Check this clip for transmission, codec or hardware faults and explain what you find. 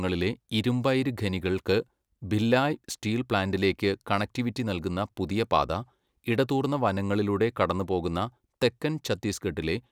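No faults can be heard anywhere in the speech.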